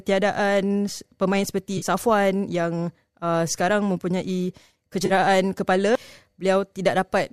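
At 1.78 to 1.85 s and again at 5.06 to 5.13 s, AAC frame loss with concealment leaves brief smeared, phasey patches of about 40 ms, consistent with four lost frames, each rebuilt from the previous spectrum. A spectrogram shows blurred, streaky bands where fine detail vanishes.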